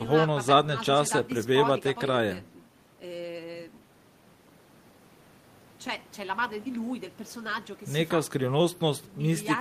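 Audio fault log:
No technical faults turn up anywhere in the speech signal, so there is nothing to log.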